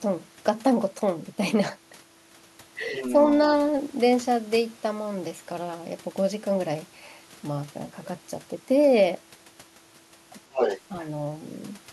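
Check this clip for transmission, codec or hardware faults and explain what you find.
There is one fault: the other side's voice leaking through. It appears at 2.87 to 3.32 s, 10.53 to 10.8 s, and 11.0 to 11.07 s. A second voice sits under the speech in short scraps. The first is clearly quieter than the main talker. The second is about as loud as the speech. The third is faint. The likely cause is an echo canceller that failed to strip the far-end loudspeaker sound from the microphone signal.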